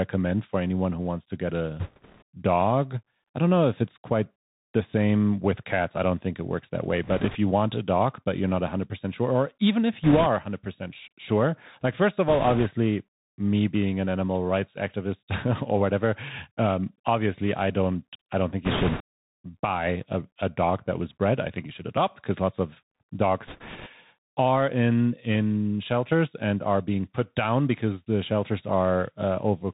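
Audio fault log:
throughout, Bluetooth CVSD headset codec: a one-bit, 64 kbps-style delta coder stops everything above 4 kHz, so the speech is muffled, s sounds scratchy, and a granular hiss sits underneath.
1.80 to 2.22 s, 7.04 to 7.36 s, 10.04 to 10.27 s, 12.28 to 12.67 s, 18.65 to 19.02 s, 23.47 to 23.88 s, bit errors on a Bluetooth voice link: flipped bits on the headset link, a few percent and around a tenth at 18.65 s between "don't I don't think" and "buy a a dog", add rushing crackle without loud clicks.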